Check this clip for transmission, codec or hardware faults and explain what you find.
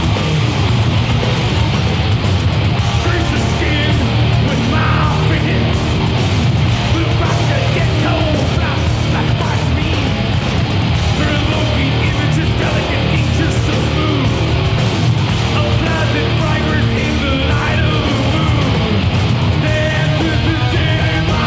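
Two faults show up, both close together near the 6-second mark. The audio passes through a G.722 call codec at 64 kbps, and nothing is heard above 8 kHz.

The first is a skip ahead at 5.38 to 5.40 s. Roughly 0.4 s of audio was dropped, either in transit or by an overflowing jitter buffer. Later audio was already waiting, so playback jumped straight to it. Nothing fills the gap. The sound before and after the jump is joined almost directly, and the missing stretch simply never plays.

The second is a jitter buffer speed-up from 5.93 to 6.51 s. The buffer was holding more audio than it aims for. To cut the delay, the receiver removed many short pieces, each one or a few pitch periods long. About a tenth of a second went in total. Over that half second, the audio runs at 115 percent speed. The pitch stays the same, but the sound comes across as hurried.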